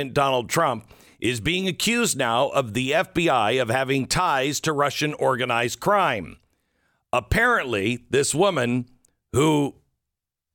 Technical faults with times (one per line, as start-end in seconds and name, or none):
none